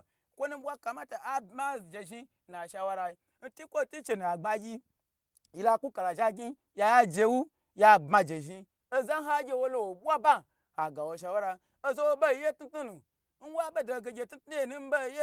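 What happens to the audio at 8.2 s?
Around 8.11 to 8.17 s, there is a lost packet rebuilt from error correction. The sound points to two lost packets. The following packets carried low-bitrate copies, which the decoder played instead. The speech continues without a gap, but about 40 ms sounds rougher and noisier.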